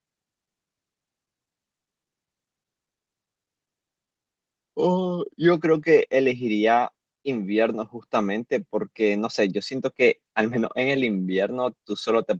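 No technical faults can be heard anywhere in the speech.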